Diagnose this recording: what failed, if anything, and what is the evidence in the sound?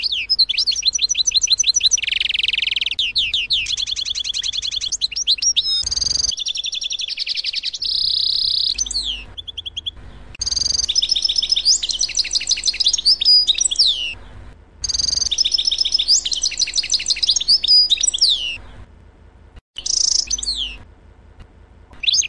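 Nothing stood out on listening that would point to a failure at any stage of the chain.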